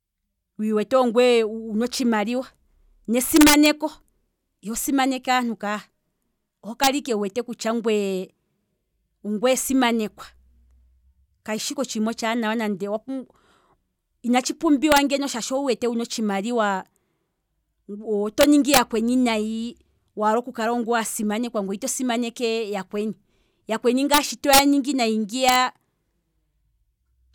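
Integer overflow hits the speech seven times. The signal went past the largest integer and wrapped to the opposite sign instead of limiting. The longest bursts run from 3.36 to 3.66 s and 18.41 to 18.78 s, each driven about 6 dB over. Shorter cracks follow at 6.84 to 6.87 s, 14.92 to 14.98 s, 24.14 to 24.18 s, 24.53 to 24.59 s and 25.49 to 25.56 s. These are about 1 to 4 dB over. Each loud peak flips across the full range. The result is violent cracks, far harsher than clipping.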